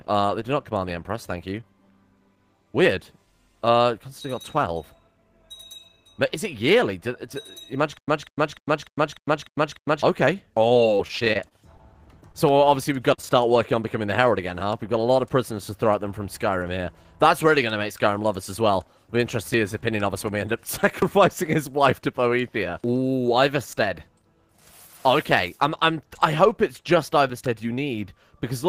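Around 7.97 to 10.03 s there's a stutter with silent gaps: a fragment of about 0.19 s plays, then roughly 0.11 s of dead digital silence, and the pair repeats every 0.30 s or so, seven times in all. That even rhythm, with the same burst coming back each time, most likely means the player or stream stalled, replayed the last chunk it held on each retry and ran dry, so whatever should have played across those two seconds never arrives. Right after, from 10.73 to 11.81 s, you get repeated packet loss with that robotic, choppy texture. The span is peppered with short holes, the longest about 23 ms, with roughly 120 ms of audio missing in total. The receiver papers over each hole by extending the last sound, which adds up to about 153 ms of patched material, around 14 % of the stretch. Those back-to-back patches give it the broken quality. Then there are two isolated cases of short concealed packet loss, at 12.32 to 12.36 s and 13.14 to 13.20 s. 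In each, a brief piece of the stream didn't reach the decoder in time, about 20 ms in the first case and 40 ms in the second. The decoder bridged the hole by carrying the previous sound forward and blending back in, so you hear a quick smear or wobble rather than a clean dropout. The second is longer.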